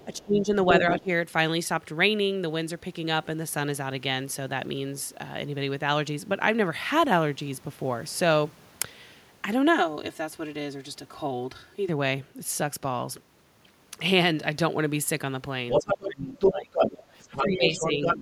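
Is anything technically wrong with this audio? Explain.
Yes, three kinds of fault are audible in this speech clip.

A second voice is heard under the talker from 0.0 to 0.16 s, faintly and about 30 dB down, then from 0.69 to 1.0 s and again from 15.7 to 18.18 s at roughly the same level as the talker. This is the other side's voice leaking through. The likely cause is the talker's device playing the other party on a loudspeaker into the microphone, with the echo canceller leaving part of that echo in the signal.

Around those same moments the talker's own voice sinks, thins out or breaks up: from 0.05 to 0.5 s and from 15.76 to 16.75 s by as much as about 20 dB, from 0.96 to 1.08 s by about 15 dB, and from 17.32 to 18.21 s by about 10 dB. This is speech suppressed in double talk. With both sides speaking at once, the canceller likely could not tell the talker from the echo and attenuated both.

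From 9.7 to 11.89 s the speech turns hollow and phasey, as if heard through a tube. This is channel delay producing comb filtering. One channel trails the other by about 3 ms, and when the two are summed to mono the shared content cancels at regularly spaced frequencies. The first notch falls around 150 Hz, and further notches repeat at intervals of a few hundred hertz across the spectrum.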